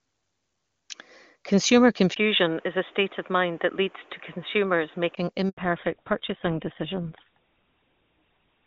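Speech carried over AMR-WB wideband at first, at a rate that fits 23.85 kbit/s, with a full, bright band. At 2.14 s, after a 20 ms silence, the sound turns boxy and dull, with nothing above 3.8 kHz, and a new background noise sits about 30 dB below the speech while the level stays steady. This is most likely the input switching to a poorer device. The new noise floor and the full band returning at 5.17 s set it apart from a codec change. A handover gap follows at 5.49 s: the sound dies away and stays silent for 80 ms until 5.57 s. It differs from ordinary packet loss because the audio comes back through a different link with a changed band. From 5.57 s to the end there is a fallback to narrowband. Everything above 4 kHz is gone and the speech sounds rougher, which fits GSM full rate at 13 kbit/s. Unlike the earlier device switch, the band never recovers.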